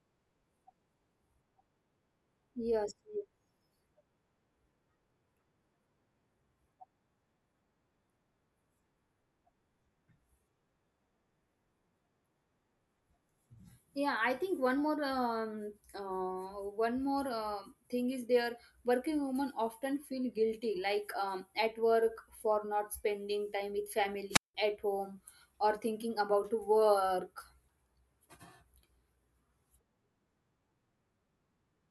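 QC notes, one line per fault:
24.30–24.55 s, wireless microphone squelch dropout: the radio link fades, hiss swells briefly, then the receiver's squelch mutes the output for about 179 ms before the speech returns. A spectrogram shows broadband noise haze, then a blank gap; the waveform flattens to near zero.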